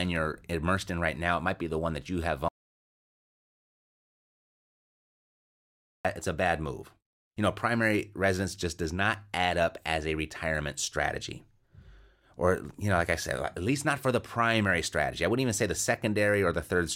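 Speech recording with an audio dropout to silence from 2.48 to 6.05 s, right after "one that you have": about 3.56 s of silence, no room tone, likely from a lost input.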